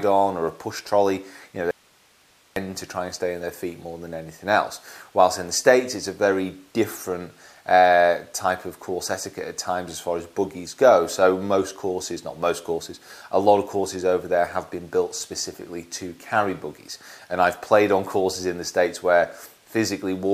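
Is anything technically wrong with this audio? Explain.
Yes. From 1.71 to 2.56 s there is an audio dropout to a faint residue: the signal cuts abruptly for 0.85 s, leaving only hiss around 35 dB down, likely a momentary signal loss upstream.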